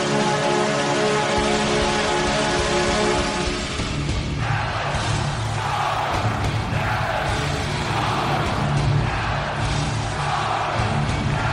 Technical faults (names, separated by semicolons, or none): sample clock jitter